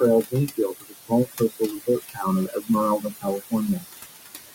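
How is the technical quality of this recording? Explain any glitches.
The recording carries noise suppressor artifacts, and the suppressor also clips parts of the speech in three places.

Noise suppressor artifacts run through the whole clip. The suppressor pulls the room noise down by about 17 dB whenever it judges a band to be steady noise. The remaining noise then pumps, sinking in pauses and rising under speech.

Speech cut by the noise suppressor occurs at 0.81 to 1.61 s, 2.08 to 2.20 s and 2.47 to 2.69 s. The room noise sits about 11 dB below the speech, and the suppressor took some of the quieter speech for noise. Drops reach about 18, 16 and 12 dB. In the first span, only a couple hundred milliseconds are hit. The affected bits sound swallowed.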